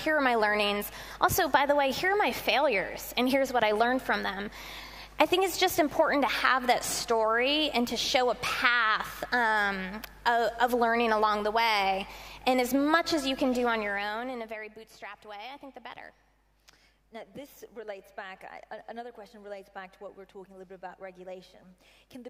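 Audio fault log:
13.6–14.78 s, zipper noise: the level was lowered in coarse 2 dB steps with no smoothing, around ten a second, for a drop of about 15 dB. Each abrupt jump leaves a small click, so a rapid ticking rides on the sound as it falls.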